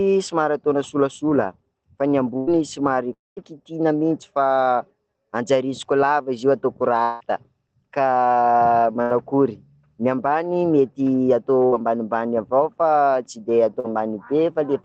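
At 2.37 s, right after "fa ny", there's a burst of packet loss. About a tenth of a second went missing, and the receiver papered over it by stretching the last bit of speech and fading it down, so you get a brief held sound before the talk picks up a little further on. The same thing happens at 9.02 s (roughly 80 ms gone) and again at 11.66 s (around 60 ms), each a short filled stretch with a small jump afterward.

At 3.13 s the speech drops out for about a quarter second. The last sound hangs on, thins out, and then there's a clear patch of silence before the audio comes back at 3.39 s, with that whole chunk just gone. That's most likely a long network dropout. It happens again at 7.03 s, just after "izy io ataoko". This time roughly 0.18 s is lost, and the fading continuation covers the whole gap without going fully quiet, so it sounds more like a drawn-out smear than a hole.

Near the end, at 13.80 s, there's a short concealed packet loss. 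Only about 40 ms went missing, and the decoder patched it by extending the sound it had and blending back in. You hear it as a quick wobble rather than an obvious break.

All of this sits on an Opus call path. The audio is band-limited to 8 kHz, and the coding texture points to a modest bitrate of around 20 kbps.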